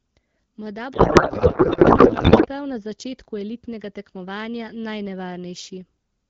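From 0.94 to 2.47 s there's a codec payload misread: octet-aligned AMR frames get unpacked as bandwidth-efficient, so the speech collapses into garbled noise and warble.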